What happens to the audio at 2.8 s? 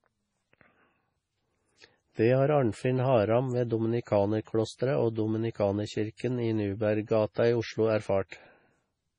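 At 2.8 s the speech carries the same heavy MP3 compression damage heard across the whole clip, likely from a low bitrate that fits about 24 kbps. Starved of bits, the encoder cuts everything above 10.5 kHz and drops weak frequency lines that flicker on and off between frames, giving a watery, swirly texture. On a spectrogram the energy stops at a hard ceiling near 10.5 kHz, with patchy, blocky gaps below it.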